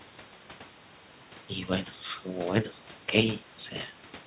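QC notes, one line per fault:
No faults found.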